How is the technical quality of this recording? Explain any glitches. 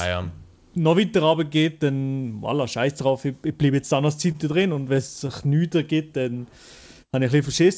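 Two glitches show up in this call-path speech recording, which goes silent above 8 kHz, consistent with G.722 at 64 kbps.

From 4.32 to 5.30 s there's repeated stalls (stutter): packets arrived late, the jitter buffer kept running dry, and the receiver stretched the last sound across nine short gaps, each 25 ms or shorter. Nothing is lost, but it drags and stumbles.

From 6.23 to 6.96 s there's a jitter buffer slow-down: the receiver repeated pitch periods to rebuild its reserve, adding 82 ms. The sound plays at 90% speed with the same pitch and comes out drawn-out.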